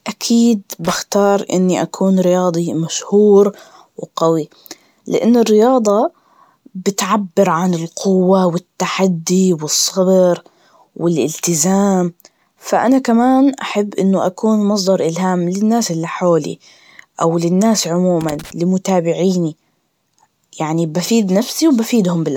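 Right from the start and all the way through, the speech has a swirly, hollow quality. Consonant attacks are blurred, and there's a smeared, watery texture that seems worse than a decent bitrate should give. Content stops at about 20.1 kHz. That's the signature of generation loss, likely from the audio going through lossy coding around four times, with each decode and re-encode landing on a shifted frame grid so the quantisation damage stacks up. It sounds like MP3 at about 128 kbit/s.

At 0.85 to 0.95 s there's a short, irregular burst of scratchy crackle just before "إني أكون رياضي مشهور". That's loose connector crackle, a worn or dirty contact rapidly making and breaking, chopping the signal into little fragments. It comes back for longer, from 18.21 to 18.51 s, right after "أو للناس", with the same ragged, scratching character as the contact flickers.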